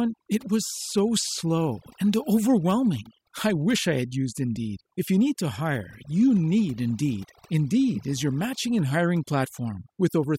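Overdone noise removal affects the speech from start to finish. A noise reduction stage was set too aggressively. Frequency bands close to its noise estimate are cut hard, taking quiet parts of the voice with them. The background drops and breaks up into twinkling, warbling specks.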